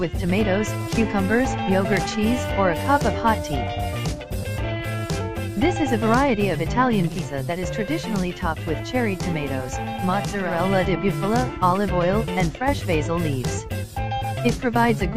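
At 7.04 s the audio crossfades, over about 295 ms, into a hissier version of itself. That's digital radio blending to analogue: the receiver lost the digital stream and slid over to the station's FM broadcast. The level drops by about 3 dB, and a hiss sits roughly 35 dB under the programme. It stays on FM until 10.67 s, then blends back to the cleaner digital sound.

Later, from 12.56 to 12.68 s, there's a quick dip of about 6 dB lasting roughly 126 ms before the level snaps back. A drop of exactly that size points to one channel dropping out: with a stereo channel missing, the mono sum loses half of everything the two channels shared. That's the likely cause here, a brief loss of one side rather than a fade or a gain change.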